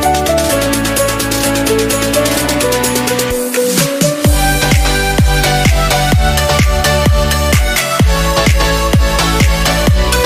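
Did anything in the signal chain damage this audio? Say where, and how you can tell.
No, nothing in the signal chain can be heard damaging this audio. No stage from capture to playback leaves any audible trace on it.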